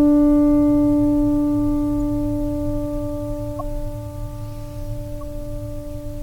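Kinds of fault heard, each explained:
Corrupt frame decoded: at 3.59 s, a couple of damaged frames play anyway, giving a brief glitch of misplaced energy peaking around -15 dBFS rather than the silence or smear of a dropout.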